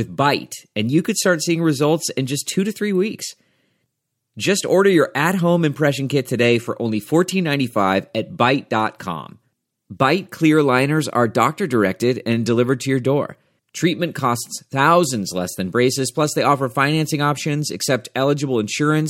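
No faults are audible anywhere in this speech recording.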